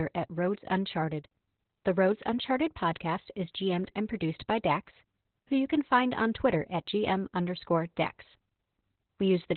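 Right from the start and all the way through, the speech carries heavy Opus voice compression. Nothing survives above 4.3 kHz, so it's narrowband and muffled, and the coarse SILK coding leaves it hoarse and a bit robotic, which fits a bitrate around 8 kbps.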